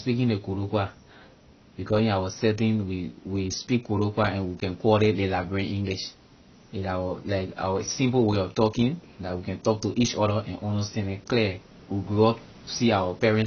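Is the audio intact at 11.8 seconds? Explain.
No. At 11.8 s, as throughout, the speech is dull with nothing above 6.6 kHz, and sibilants warble and fizz. Likely AAC compression at a low bitrate, around 24 kbps, thinning and smearing the spectrum. A plain low-pass filter would dull the sound without that warbling texture.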